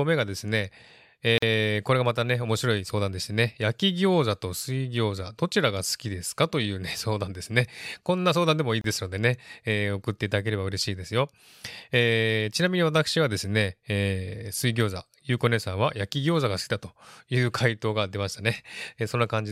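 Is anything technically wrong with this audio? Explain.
Yes. Gaps at a join of encoded pieces occur at 1.38 to 1.42 s (about 44 ms) and 8.81 to 8.84 s (about 29 ms). Separately encoded segments were spliced with their encoder delay and end padding left in. The speech drops into brief silences with smeared edges, then resumes where it stopped.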